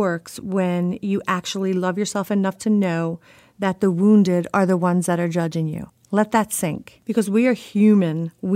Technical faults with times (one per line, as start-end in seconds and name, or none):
none